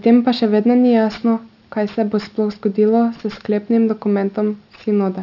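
Aliasing runs through the clip: the rate was lowered without an anti-alias filter, fitting a drop to 12 kHz, so energy above 6 kHz folds below it. Sibilants turn gritty and metallic with faint false tones, where a clean low-pass would just dull them.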